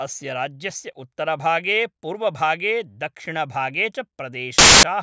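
Right near the end, from 4.58 to 4.83 s, there's a quarter-second blast of very loud white noise with hard edges. That's file tags played as audio: the embedded cover picture, being compressed data, got read as samples and comes out as pure static.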